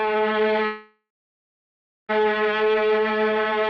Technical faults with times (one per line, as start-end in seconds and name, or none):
0.65-2.10 long network dropout